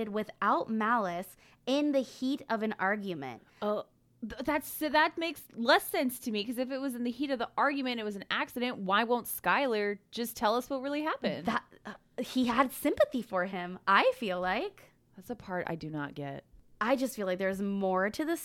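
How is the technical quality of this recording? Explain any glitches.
No glitches can be heard anywhere in the recording; the signal stays continuous and steady throughout, with no technical faults to explain.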